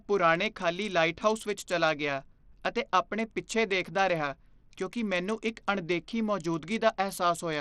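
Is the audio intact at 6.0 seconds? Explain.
No. At 6.0 s, as throughout the speech, the treble flickers and drops out under a gritty, aliased haze. This is likely Bluetooth SBC compression starving the upper sub-bands of bits, consistent with roughly 80 kbps. Unlike a clean low-pass, the top end comes and goes, with a roughness no filter produces.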